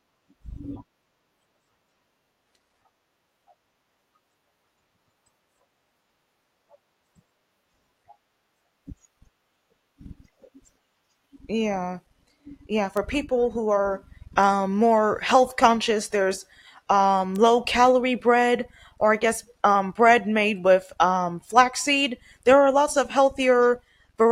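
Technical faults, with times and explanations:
12.97 s and 17.36 s, bit error spikes: single sharp ticks, peaking at about −10 dBFS and about −16 dBFS, from one flipped bit jolting one or two samples by a power of two. Unlike a dropout or an edit click, nothing goes missing around them.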